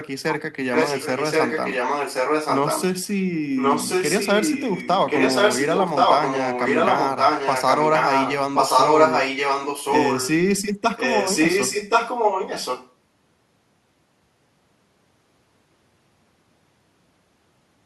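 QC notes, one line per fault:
0.73–2.84 s, 3.56–8.34 s, 8.54–10.3 s and 10.96–12.94 s, echo leak: a second copy of the speech trails the original by about 1.1 s. It is roughly as loud as the direct speech, and a little louder in the 8.54–10.3 s stretch. The likely cause is a far-end loudspeaker feeding its microphone while the echo canceller let the signal through. That copy came back down the call path.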